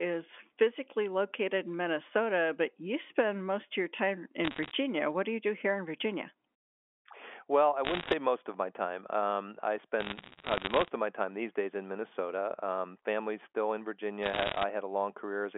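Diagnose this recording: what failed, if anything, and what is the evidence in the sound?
Bit errors on a digital phone line, in the transmission stage, produce bursts of sharp ticks and crackle at 4.44–4.71 s (after "most of your time"), 7.85–8.13 s (before "most of my time"), 10.00–10.90 s, and 14.22–14.64 s (after "family's still in"). The G.711 mu-law coding carries the 250 Hz to 3.4 kHz band. Flipped bits, at an error rate of roughly one to one and a half percent, corrupt single samples. Hits on sign or high-order bits throw large spikes over otherwise intact speech.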